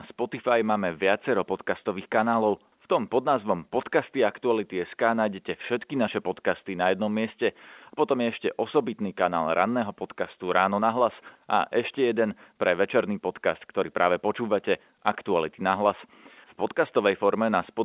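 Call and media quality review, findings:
No faults found in the speech. G.711 A-law telephone coding at 8 kHz: band-limited telephone sound, nothing above 4 kHz, with faint quantisation noise that follows the signal level.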